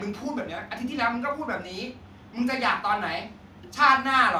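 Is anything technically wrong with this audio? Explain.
No, no technical faults are audible.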